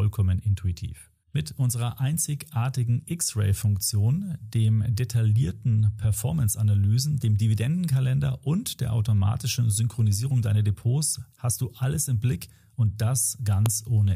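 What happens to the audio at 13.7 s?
At 13.66 s a file header is played as audio: leftover header bytes become a sharp snap, unlike a dropout's gap, since nothing goes silent.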